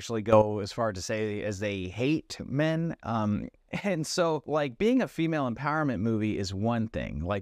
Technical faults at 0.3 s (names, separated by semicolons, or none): sudden gain jump